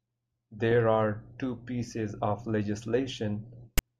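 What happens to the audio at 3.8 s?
File tags played as audio, from about 3.78 to 3.80 s: a block of text tags is decoded as if it were samples, so the speech is cut by a hard-edged burst of loud, one-sided rasp, then the tag's zero padding drops to silence.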